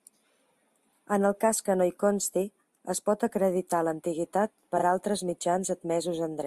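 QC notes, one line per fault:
0.93–0.98 s: frames out of order. Two adjacent blocks of about 21 ms each were decoded in swapped order, so this short stretch of speech plays its halves back to front. It is heard as a brief garbled flutter. No time is lost.
4.77–4.83 s, just after "es pot acreditar l'antiguitat": frames out of order. The same single-frame swap of about 21 ms blocks produces another quick flutter.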